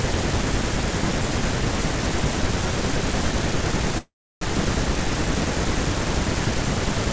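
At 3.98 s the speech stops and a call audio freeze runs until 4.43 s. The last fragment of sound is stretched into a short fading buzz, then about 0.31 s of silence follows before the speech resumes exactly where it broke off. Roughly 0.43 s of filler has been inserted with nothing lost, so everything afterward arrives that much later. This is likely a packet delay that drained the jitter buffer. The G.722 band limit at 8 kHz applies throughout.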